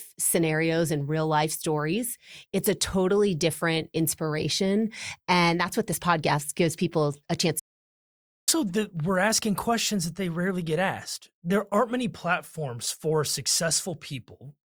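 At 7.60 s, after "gives people a chance", the speech stops dead. An audio dropout to silence follows, lasting 0.88 s, with no room tone. A lost input likely caused it. The sound returns at 8.48 s with "that we're asking questions".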